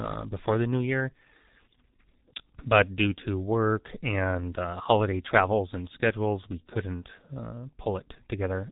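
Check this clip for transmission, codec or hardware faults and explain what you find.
One codec fault runs through the whole speech clip: G.723.1 codec damage, and it is heavy. The codec sends very few bits per 30 ms frame, consistent with roughly 6 kbit/s. Nothing above 3.8 kHz survives. Its slowly updated voice model leaves speech muffled and hoarse, with smeared consonants.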